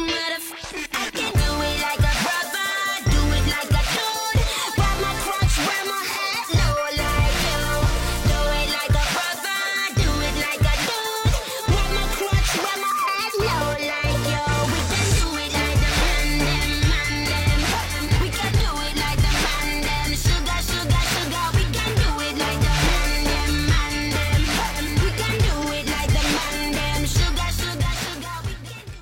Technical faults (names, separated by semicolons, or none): repeated frames